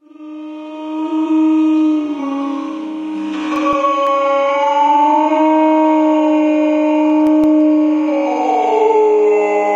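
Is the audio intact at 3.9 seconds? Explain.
No, 3.9 seconds sits inside a run of CD scratch ticks from 3.56 to 4.07 s. A blemish wipes out more data than error correction can rebuild on each pass, so the player patches or mutes it, leaving four short ticks, each under a couple of milliseconds.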